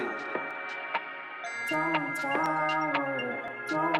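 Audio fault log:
0.51 s, 2.46 s, 3.48 s: dropped samples, likely the cause of three isolated sharp clicks. Each time, a fraction of a millisecond of the stream goes missing, so the waveform jumps abruptly to a later value. Each shows as a thin vertical line spanning the spectrogram.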